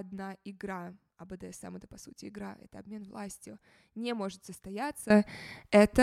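A sudden gain jump hits this speech clip at 5.10 s and holds to the end: the level rises by about 16 dB in a single step, speech and background noise together, most likely a digital gain setting applied instantly without any ramp.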